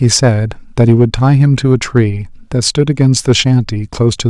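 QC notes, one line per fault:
0.04–0.28 s, 0.80–1.33 s, 1.72–1.99 s and 2.79–3.40 s: hard clipping on the speech peaks. The level is driven roughly 3 dB past the limit of the stage in the first two spans and about 2 dB past it in the last two, so the waveform tops are sliced flat. Those squared-off peaks generate upper harmonics that were never in the speech, heard as a gritty crackle riding the louder syllables in each span.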